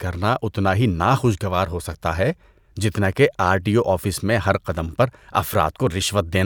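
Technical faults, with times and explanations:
Nothing technical stands out in this bit of speech; I couldn't hear any fault worth noting.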